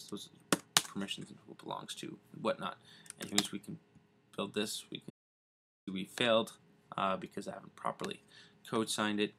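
At 5.10 s the sound cuts off mid-flow into complete silence, with no room tone underneath, and it resumes just as abruptly at 5.87 s. This is an audio dropout to silence lasting about 0.77 s, and whatever was happening during that stretch is simply gone. The likely cause is that the input signal was lost, through a disconnected device, a failed link or an accidental mute, while recording carried on writing silence.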